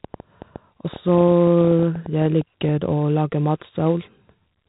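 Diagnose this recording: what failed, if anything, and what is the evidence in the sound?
Codec stage: heavy 4-bit ADPCM compression throughout. Coarse 4-bit prediction steps leave gritty hiss that tracks the speech level. There is nothing above 3.8 kHz, consistent with a 32 kbps stream.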